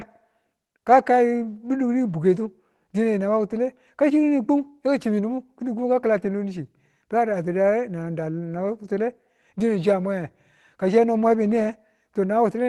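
Speech carried over an Opus call path at about 24 kbps, with audio reaching up to 12 kHz. Two brief rough patches show a lost packet rebuilt from error correction. The first runs from 7.27 to 7.33 s, about 40 ms of rebuilt sound, which fits two lost packets. The second runs from 8.83 to 8.85 s, which fits one packet. There is no gap. Each following packet carried a low-bitrate copy, and the decoder played it. Those frames sound coarser and noisier.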